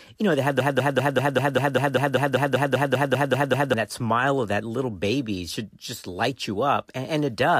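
From 0.60 s to 3.74 s the speech falls into a broken-record loop: a 196 ms fragment plays 16 times back to back, likely because the stream stalled and kept resending its last piece. Unlike an echo, nothing decays, and the lost speech never returns.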